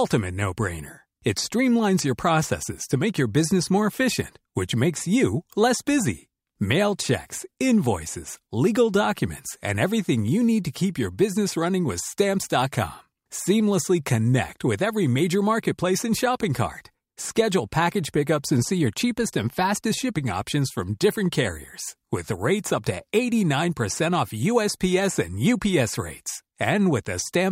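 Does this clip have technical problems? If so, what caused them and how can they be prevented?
No, nothing in this speech recording points to a technical fault, so there is no cause to trace and nothing to prevent.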